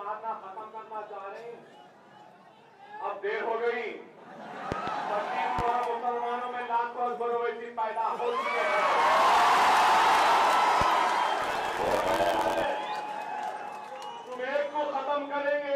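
Loud pops come at 4.72 to 4.91 s as two pops, and at 5.59 to 5.71 s as two more. A single pop follows at 10.82 to 10.85 s. They peak about 15, 10 and 15 dB above the sound, which continues underneath. The likely cause is a sudden voltage step from a plug, switch, static or driver glitch.

From 11.41 to 12.65 s there is a block size mismatch (truncated). The end of each written block is discarded, which fits 512-sample blocks. This causes a 91.9 Hz buzz and makes the audio run 1.07 times fast.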